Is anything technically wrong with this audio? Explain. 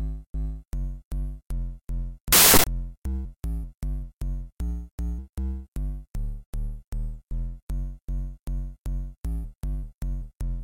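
Yes. From 2.32 to 2.64 s, samples built from the wrong bytes: misassembled bytes promote low bits into loud, harsh broadband noise, showing as a dense waveform block and broadband spectrogram smear.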